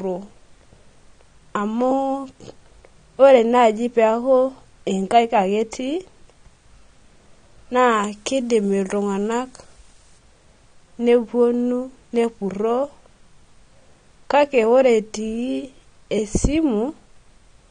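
Speech with a dull, smeared top end throughout: nothing remains above about 9.7 kHz, and sibilants carry a warbling, fizzy texture with plainly audible damage. That points to AAC compression, likely AAC-LC at around 32 kbps, rather than a simple low-pass filter, which would leave no swirling artefacts. From 7.92 to 10.18 s, pre-emphasis left on makes the sound thin and bright, with treble up about 8 dB at 10 kHz, fitting the CD 50/15 µs curve. The smooth shelf shape distinguishes it from harsh sibilance.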